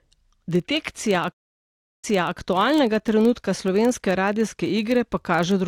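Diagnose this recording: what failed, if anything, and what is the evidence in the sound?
A filter restarted on every block runs through the whole speech clip, heard as a 23.4 Hz buzz that rises and falls with the speech level. Each processing block begins from silence with a small transient. The rate fits a 2048-sample buffer at 48 kHz.

A stream reconnect, a network fault, spans 1.32 to 2.36 s: about 0.71 s of silence, then a fresh decoder resumes on "aktualnega trenutka slovenske", 0.32 s earlier than where it cut off. This points to the server resending a burst after the connection dropped.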